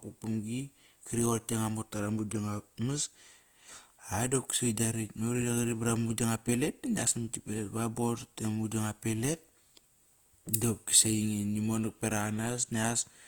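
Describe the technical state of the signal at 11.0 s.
At 11.0 s, as throughout, speech sounds grainy and rough, likely from Opus compression around 24 kbps, which fills bit-starved bands with noise or folded spectrum.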